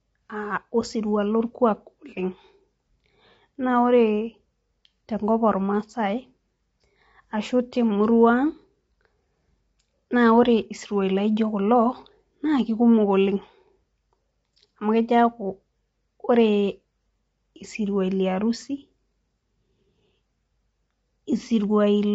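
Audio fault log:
throughout: low-delay AAC compression. The speech sounds rough and grainy, with noise between the harmonics and nothing above 7.8 kHz. This is likely AAC-ELD, whose short frames resolve pitch harmonics poorly. The plainly audible damage fits a bitrate near 24 kbps.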